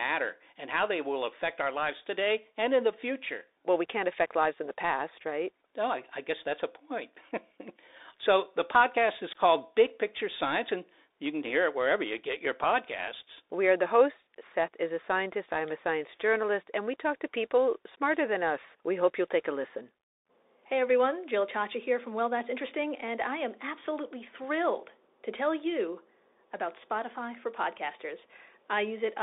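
A speech clip that's been through a Bluetooth CVSD headset codec for its whole length, and it's plainly audible. Everything sits in a narrow band from about 300 Hz to 3.7 kHz, so there's no low body and no air on top. The one-bit-per-sample coder, which fits a 64 kbps link, can't keep up with loud, fast high content: s sounds come out scratchy, and a grainy hiss rides underneath throughout.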